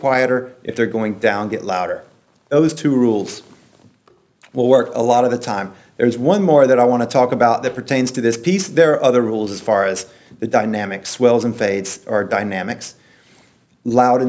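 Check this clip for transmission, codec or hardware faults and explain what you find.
The clip has one fault, aliasing, present throughout. The audio was downsampled without an adequate anti-aliasing filter, which fits a drop from 48 kHz to 16 kHz. Content above the new 8 kHz limit folds back below it as unrelated tones, roughly 25 dB under the signal, so bright sounds turn gritty and metallic and the spectrum runs right up to 8 kHz. A clean low-pass cut would simply sound dull. This fault adds false, inharmonic hash instead.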